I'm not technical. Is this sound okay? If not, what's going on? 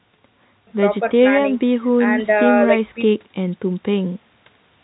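Yes, there is nothing wrong with this recording. It went through ordinary G.711 telephone coding, which keeps nothing above about 3.9 kHz, so it has the familiar narrow sound of a normal phone line.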